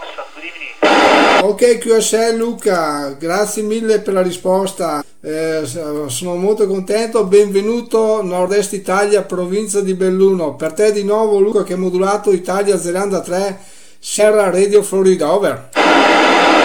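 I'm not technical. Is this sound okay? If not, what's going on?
No. At 1.39, 5.00, 8.47, 11.51 and 14.18 seconds the sound briefly jumps ahead, losing up to a tenth of a second, or about a fifth at 5.00. These are compressed frames skipped: small chunks of the file were missing or damaged, so playback leapt past them.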